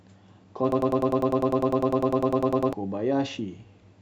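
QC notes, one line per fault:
0.72–2.73 s, broken-record loop: a 100 ms fragment of the speech repeats exactly, back to back, 20 times, so for about two seconds the sound stutters at a steady 10 Hz buzz-like rhythm and the speech that belonged in that span never arrives. A stalled player or stream likely kept resending its last buffered piece. On a spectrogram the same 100 ms pattern tiles identically across the span; the waveform shows an identical block copied repeatedly.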